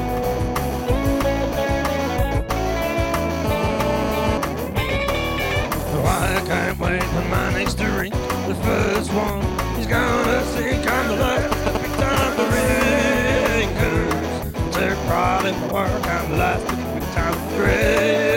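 From 3.45 to 4.38 s there's GSM phone buzz: a hard, raspy drone sitting about 5 dB under the sound, with a fundamental near 217 Hz and a stack of harmonics above it that has nothing to do with the audio. That's a 2G handset mid-call somewhere close, its transmitter pulsing 217 times a second while some stage in the audio chain rectifies the radio energy into the signal.

At 11.52 s the character changes to GSM signalling bursts, running to 12.24 s. Instead of a steady drone you get a galloping dit-dit-dit of ticks and short buzzy fragments, roughly as loud as the sound itself. That's the handset talking to the network in brief clumps of bursts, the kind of thing it does just before a call connects.

At 12.38 s the steady GSM phone buzz returns and holds until 13.61 s, about 6 dB under the sound, with the same 217 Hz rasp as the call traffic resumes.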